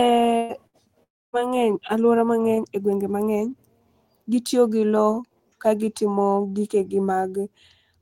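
Speech in which the sound twice freezes into a brief held buzz or hiss that fades, at 0.37 to 0.52 s and 0.67 to 0.76 s, a burst of packet loss where about 120 ms and 60 ms of audio went missing and were concealed. From 1.03 to 1.36 s a similar fading tail quickly sinks to near silence before the speech resumes further on, most likely a long network dropout losing about 300 ms.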